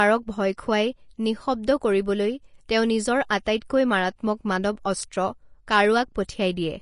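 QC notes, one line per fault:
Throughout, Vorbis compression: the top end stops dead around 10.6 kHz, and the treble left below that is hissy and grainy, with smeared attacks. Likely a low-bitrate Vorbis encode, roughly 33 kbps, where coarse treble quantisation swaps fine detail for noise.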